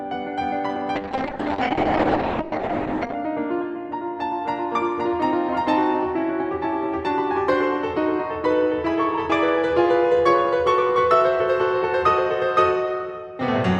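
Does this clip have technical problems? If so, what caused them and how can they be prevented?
Yes. From 0.96 to 3.21 s the music goes through a call bitrate drop: the bandwidth estimate collapsed and the encoder was squeezed hard, which sounds like a fall from around 48 kbps to roughly 7 kbps, bottoming out for about 2.2 s. The top end gets chopped from 20 kHz down to 8 kHz, so it turns muffled and watery until the rate climbs back. To prevent it, keep the uplink uncongested and give music a higher minimum bitrate floor.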